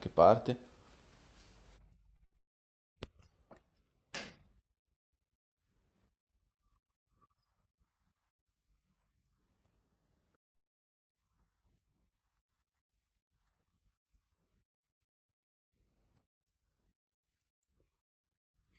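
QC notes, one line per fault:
2.17–2.21 s, 2.33–2.36 s, 10.43–10.47 s, 10.49–10.52 s: short concealed packet loss. About 20 ms of audio is missing each time. The receiver bridges each hole by extending the preceding sound and blending back, so each is heard as a brief smear or wobble rather than a clean cut.
2.25–2.33 s: burst of packet loss. About 60 ms in a row failed to arrive. The decoder continues the last sound and fades it across the gap, giving a held buzz or hiss before the audio picks up further on, with that stretch missing.
2.38–2.98 s, 10.56–11.18 s: long network dropout. Each gap is a little over half a second. The last sound is extended briefly and decays, then roughly half a second of near-silence follows before the audio resumes, with the lost material skipped. This is likely a network outage on the Opus call path, whose coding is band-limited to 8 kHz.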